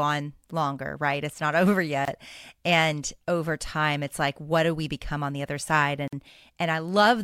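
Separately encoded pieces were joined without trimming each encoder's start delay and end padding, leaving gaps at the joins, spaced 4 s apart. Speech breaks off in a gap of 25 ms at 2.05 s and 49 ms at 6.08 s, after "on the other side", with smeared edges, then resumes where it stopped.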